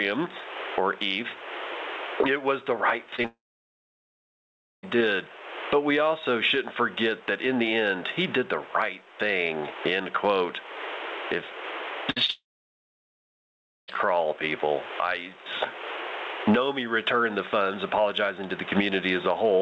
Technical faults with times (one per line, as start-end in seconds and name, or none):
0.00-19.62 gain pumping
3.16-3.26 short concealed packet loss
3.26-4.85 long network dropout
12.11-12.18 burst of packet loss
12.26-12.30 short concealed packet loss
12.30-13.90 long network dropout